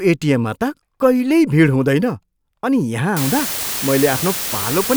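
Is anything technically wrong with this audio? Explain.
Yes. From 3.17 s to the end, the speech shows low bit depth with dither. At about 4 bits, dithered rounding error becomes a steady, even hiss, nearly as loud as the speech, without distortion.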